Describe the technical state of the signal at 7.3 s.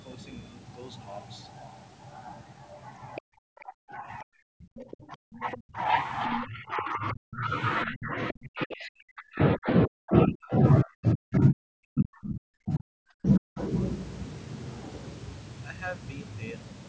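At 7.3 s the speech is being pushed down deep, by about 40 dB at worst, within a stretch from 6.42 to 7.51 s. This is speech suppressed in double talk, likely from an echo canceller mistaking the talker for loudspeaker echo.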